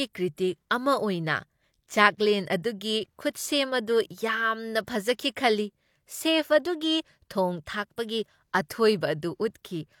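Pre-echo sits at 0.35 to 0.38 s in this speech clip, a smear of hiss about 31 ms long arriving just ahead of a sharp onset. A transform codec quantised that stretch as one block and spread the coding noise across all of it, so noise scaled for the loud attack also spilled into the near-silent instant before it. The result is a short rushing lead-in and a softened, blurred attack.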